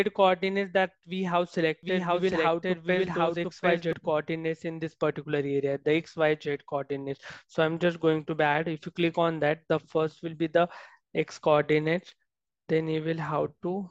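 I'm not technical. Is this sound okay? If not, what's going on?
No, not quite. From about 1.83 to 3.93 seconds there's a doubled audio track: the same sound plays twice, with a second copy trailing around seven-tenths of a second behind and about as loud as the original. It isn't a natural echo; it has no fade or room feel, and it pops in and drops out abruptly. The likely cause is the sound being picked up again through a slower route, or an edit leaving two copies out of step.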